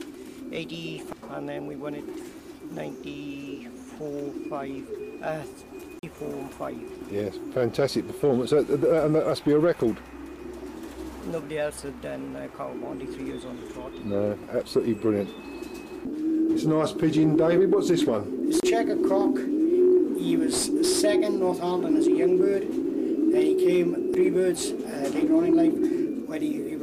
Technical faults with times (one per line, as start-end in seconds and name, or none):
1.13 CD skip
5.99-6.03 CD skip
18.60-18.63 CD skip
24.14 CD skip